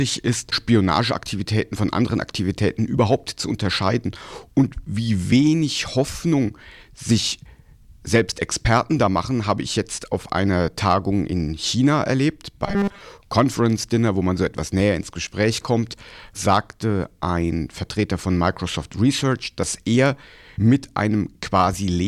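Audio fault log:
12.66–13.01 s, robotic sound from repeated short buffers: for about a third of a second the speech collapses into a stiff, metallic buzz at 200 Hz that still loosely tracks the syllables. The likely cause is audio arriving too slowly, so the playback side loops its last fragment to fill the gap. A fixed 200 Hz tone fits a chunk of about 5 ms being replayed over and over, and with most of this stretch made of repeats, the real speech is largely skipped.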